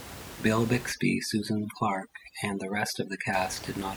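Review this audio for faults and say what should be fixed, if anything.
From 0.92 to 3.33 s the speech shows overdone noise removal. Over that stretch, the room noise, which sits about 14 dB below the speech, collapses to near silence with twinkling specks. Quieter components of the voice fall close to the noise estimate and are cut with it. On a spectrogram the background shows as isolated flickering dots on a black field, and the speech harmonics look ragged and gappy. To prevent it, lower the reduction strength so the tool attenuates the noise rather than removing it.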